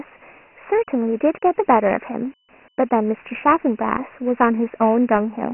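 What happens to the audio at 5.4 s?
At 5.4 s the speech sounds thin, muffled and gritty, with a rough hiss riding on it and nothing above 3 kHz. This is Dialogic VOX ADPCM, present throughout: heavy 4-bit coding at 24 kbps, which fits 6,000 samples a second, caps the band and adds quantisation grit.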